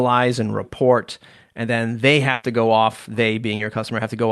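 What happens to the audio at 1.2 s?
Nothing goes wrong at 1.2 s: the speech there passes through the WebRTC call path intact, with no dropout, glitch or distortion at that moment.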